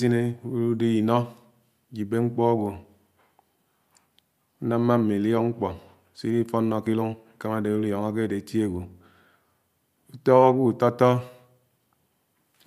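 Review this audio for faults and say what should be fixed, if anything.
Nothing stood out on listening to this speech recording, so there is nothing to fix.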